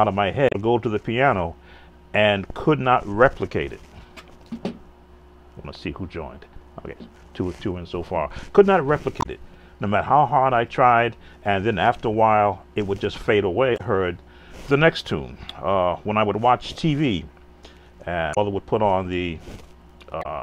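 Five brief chirps or blips, each about 70 ms long, interrupt the audio at 0.49, 9.18, 13.74, 18.31 and 20.19 s. That pattern points to damaged data in the compressed stream: the decoder misreads corrupted frames, loses sync and resumes at the next frame header.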